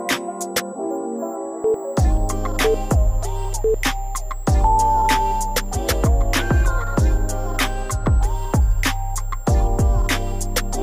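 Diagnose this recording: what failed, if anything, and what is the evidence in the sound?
A thin, high whistle runs under the sound from start to finish, sitting about 30 dB below the programme and wandering in pitch between roughly 7.3 and 8.0 kHz. This is a switching supply whistle, a fault in the analogue stage. A switch-mode power supply is cycling at an audible rate, in burst mode or beating against another converter, and its ripple is leaking into the audio path. The drifting pitch follows the supply's load.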